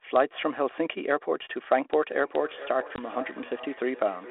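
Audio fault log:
2.22–4.30 s, feedback echo between two devices: from here to the end, each phrase returns at a steady interval of roughly 0.4 s, thinner and ringing, peaking about 16 dB below the speech. A second device is replaying this microphone's signal, which the microphone picks up again, and no echo canceller removes it.
2.96–3.00 s, packet loss on an ADPCM call: a sharp-edged gap of about 20 ms, which fits a single lost packet, replaced by silence. The G.726 decoder's prediction and step size then lag the sender's, so the speech resumes slightly distorted.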